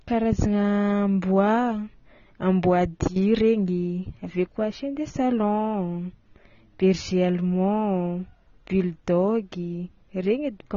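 AAC compression, throughout: nothing above 6.9 kHz, with dull, smeared, warbling sibilants, likely from AAC-LC coarsely quantising its spectrum at a bitrate near 24 kbps.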